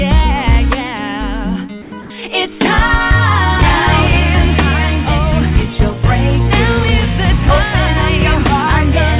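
From 1.82 to 1.92 s the sound is briefly swallowed: about 40 ms of real content vanishes and the whole 100 ms stretch becomes steady, even hiss. This is sound dropped by the voice detector. The sender most likely judged a quiet tail of the sound to be background and stopped transmitting, so the receiver filled in comfort noise. On a spectrogram the detailed texture ends abruptly in a flat, uniform wash, and the waveform's envelope flattens until the content resumes.

From 2.02 to 2.10 s, about 80 ms of the background, which sits about 19 dB below the loudest parts, is replaced by comfort noise in place of the background. With no sound being sent, the receiver likely synthesised noise that roughly matches the background's spectrum. That noise is about 2 dB quieter and has none of the original's fine detail. On a spectrogram it appears as a smooth, featureless band that stays below 4 kHz like the rest of the call audio. 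In the waveform it shows as a small, even dip in the noise floor.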